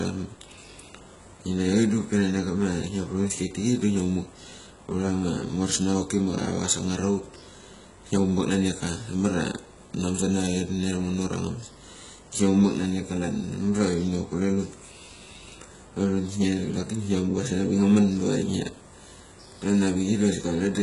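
From start to finish the speech carries HE-AAC compression damage, heavy throughout, most likely from that codec at a very low bitrate, which fits roughly 12 kbps. Only the lower band is truly coded. The treble is rebuilt by copying lower bands upward, so s sounds come out gritty and lispy, with a metallic sheen. Unlike a plain low-pass or low-rate MP3, the top end stays bright, not dull, until it stops near 11.1 kHz.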